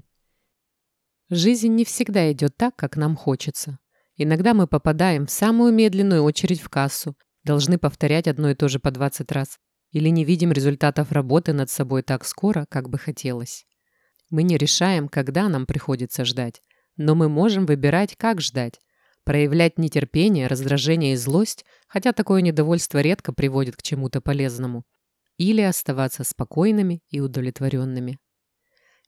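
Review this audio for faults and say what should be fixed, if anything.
At 21.30 s an electrical switching spike cuts into the speech as a sharp snap near -20 dBFS. It appears as a thin full-height vertical line on the spectrogram and a lone spike on the waveform, likely from a nearby switch or motor arcing. Keep switched equipment away from the audio cabling and use shielded, balanced lines.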